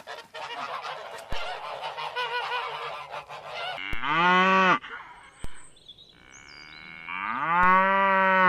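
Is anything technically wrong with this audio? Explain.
Yes. A DC step occurs at 1.33, 3.93, 5.44 and 7.63 s. Each time, the waveform's zero line jumps by about -21 to -22 dBFS and then decays away, as through a 2 Hz high-pass. Every jump is heard as a brief low thump beneath the continuing audio.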